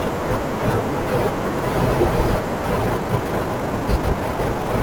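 A likely cause is software squeezing the last stretch of this speech recording to fit a shorter length, producing a time-stretched section from 2.76 s to the end at 4.83 s. Playback there runs at about 1.43 times the earlier pace while the pitch holds steady, because short pieces of the waveform are dropped rather than the whole signal being sped up. The change of tempo is abrupt, and the sped-up speech sounds rushed.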